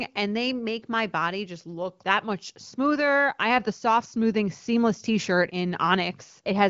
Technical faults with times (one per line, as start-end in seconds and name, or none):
none